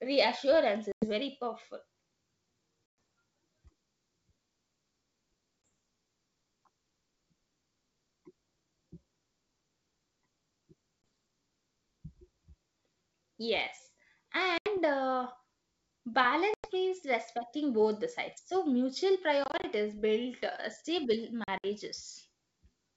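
Packet loss on an ADPCM call cuts hard-edged silent holes at 0.92–1.06 s (just before "very powerful"), 2.86–2.98, 5.67, 11.02–11.04, 14.58–14.78, 16.54–16.70, 19.44–19.65 and 21.44–21.67 s, the last two as scattered gaps around "build uh stable". The decoder's predictor and step size lose track of the sender, so the audio resumes slightly distorted. On a waveform these are flat-line gaps. A spectrogram shows blank columns.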